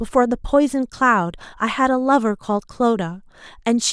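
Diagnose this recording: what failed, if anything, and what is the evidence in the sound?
Nothing failed here: the speech comes through with no fault at any stage from the wiring to playback, so there's nothing to diagnose.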